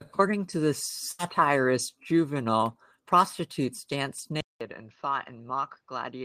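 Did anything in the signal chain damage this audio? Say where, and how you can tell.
Yes. At the network stage there is a burst of packet loss at 1.11 to 1.21 s, just after "to the". For roughly 73 ms the last received sound is held and faded rather than cut off. That is the receiver's loss concealment stretching old audio over packets that never arrived. When playback resumes, about 80 ms of the original has been skipped, so the audio jumps forward instead of continuing smoothly.

At 4.41 s, after "prostitutes danced", the capture stage changes. There is a 200 ms silence, and from then until the end the band stops at 6.4 kHz, the level drops by about 10 dB, and a different noise floor appears, roughly 45 dB below the signal. A narrower band, a new level and new background noise arriving together after a brief gap is the signature of an input switched to a poorer device, likely a second microphone or a headset's call profile.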